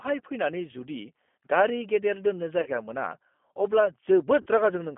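The G.729 codec runs throughout the speech, and its damage is plainly audible. The sound is squeezed into a telephone band of roughly 200 Hz to 3.4 kHz, consistent with an 8 kbit/s G.729A stream. Each 10 ms frame is rebuilt from a vocal tract filter, a pitch predictor and a handful of pulses, not from the original waveform. That is why the speech comes across as rough, thin and slightly synthetic.

VoIP packet loss concealed by the speech codec occurs from 2.61 to 2.69 s and again from 4.41 to 4.48 s. Each gap fits about 50 ms of missing audio, five lost 10 ms frames. In both places the decoder carries on from its last pitch and filter settings with falling gain. The sound smears into a buzzy tone or coloured noise that fades. Because each frame depends on the one before, the speech stays weak and distorted briefly after each gap ends.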